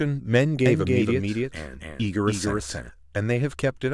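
From about 0.66 s to 2.90 s the speech picks up a doubled audio track: a second, full-band copy trails the original by roughly 0.3 s and sits around 5 dB quieter. It's clean and dry, with no tail or room colour, so it reads as a distinct repeat rather than an echo. It snaps in and out abruptly at both ends, likely from a slower second capture path or an edit holding two copies out of step.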